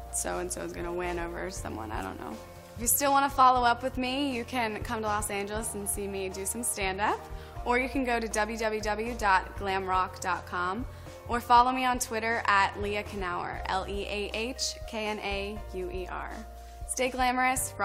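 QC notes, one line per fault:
12.73 s: compressed frames skipped. About one frame of the compressed stream never reaches the output, either missing or rejected by the decoder as damaged, so the audio jumps ahead by a few milliseconds.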